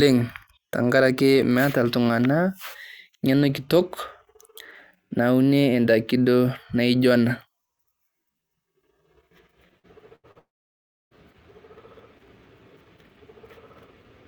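Speech with a cluster of network faults between 9.79 and 11.14 s. Two short concealed packet losses, at 9.79–9.87 s and 10.31–10.38 s, each leave about 40 ms of audio missing. The receiver covers each hole by extending the preceding sound, which you hear as a brief smear or wobble and can see on a spectrogram as harmonics or noise that run on unnaturally smooth for a few hundredths of a second before the real detail resumes. Between them, at 10.16–10.26 s, a burst of packet loss removes about 80 ms in one go. Here the concealment has to stretch further and turns the last sound into a held buzz or hiss that fades before the speech picks up again further along. On the waveform that shows as a short stretch of continued sound shrinking in amplitude, and on a spectrogram as flat, frozen bands ending in an abrupt restart. The longest fault is a long network dropout at 10.39–11.14 s, about 0.72 s with no audio delivered, likely from the connection stalling. 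Concealment carries the last sound only briefly before fading out, and then about 0.66 s of silence follows. That stretch looks like an empty gap in the waveform and a blank vertical band on the spectrogram, and when the audio returns the speech has jumped ahead with that part missing.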